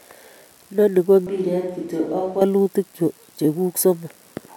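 From 1.27 to 2.41 s the speech turns hollow, roomy and thin, drops about 10 dB, with noise near 30 dB below it, likely a switch to a distant microphone.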